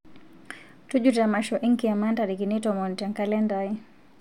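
No technical faults are audible.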